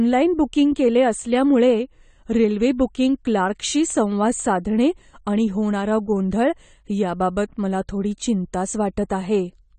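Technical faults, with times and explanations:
throughout, AAC compression: nothing survives above about 9 kHz, so the speech sounds dull and smeared, with a watery warble on held sounds and a fizzy, granular edge on sibilants. The likely cause is AAC-LC coding at a low bitrate, which fits 32 kbps. The encoder lowers its cut-off and quantises the spectrum coarsely, leaving gaps. A plain low-pass filter would dull the top without this shifting, frame-by-frame texture.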